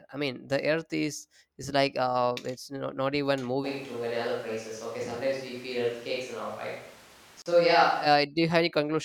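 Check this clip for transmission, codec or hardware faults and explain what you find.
Two faults are present in the speech, and they overlap near the end.

From 3.66 s to 8.05 s the speech turns roomy and hollow, with thinner bass. The level stays about the same. Background noise rises to around 25 dB below the speech. This likely comes from a switch to a distant microphone after the close one dropped out. Both changes are abrupt.

At 7.42 s a gap at a join of encoded pieces cuts a 38.5 ms hole in the speech. Separately encoded pieces were joined untrimmed, so encoder delay and end padding remain. The codec smears the edges, and the speech resumes where it stopped.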